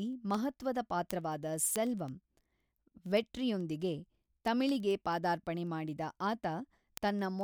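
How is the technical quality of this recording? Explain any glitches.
Word clock ticks run through the speech from 0.13 to 7.41 s: about ten sharp, unevenly strong ticks per second. An unlocked receiving clock drifting by roughly 200 ppm drops or repeats one sample per slip. Their steady rhythm sets them apart from random clicks.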